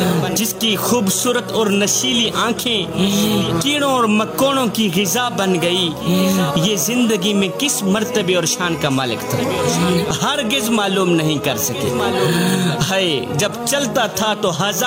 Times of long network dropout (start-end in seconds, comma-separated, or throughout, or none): none